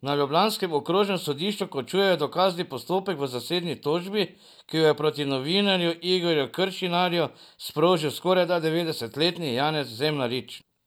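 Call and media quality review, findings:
Nothing to flag here: no dropouts, glitches or other problems turned up anywhere in the speech.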